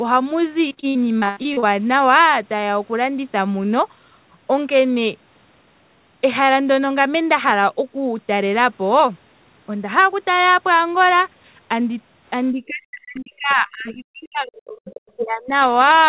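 A speech recording with two faults. From 0.68 to 1.65 s there is repeated packet loss, heard as robotic sound. About nine short holes fall in under a second, the longest near 117 ms. Each hole is bridged by stretching the last bit of sound. Then another hole arrives. Around 38% of that stretch is patched. The result is choppy, with pieces missing. From 12.51 to 15.55 s the talker fades, thins and breaks up. The drop reaches roughly 40 dB at its deepest and lasts about 3 s. This is likely speech suppressed in double talk. Both ends spoke at once, and the echo canceller could not tell the near talker from loudspeaker echo. It turned the near talker down along with the echo. Throughout, the telephone-band codec limits the sound to nothing above 4 kHz.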